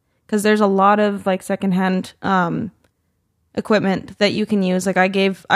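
From 0.79 to 1.89 s, channel delay (comb filtering): one channel lags by roughly a tenth of a millisecond, so the mono sum cancels near 5 kHz, sounding hollow and phasey.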